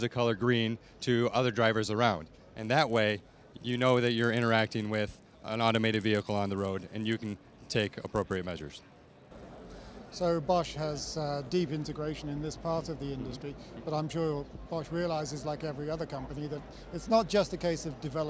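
From 2.59 s to 10.23 s the resampler restarts on every block. Each 10 ms block is converted in isolation during a 44.1 kHz to 16 kHz conversion, so every block edge carries a small error. The result is a 100 Hz buzz riding under the signal.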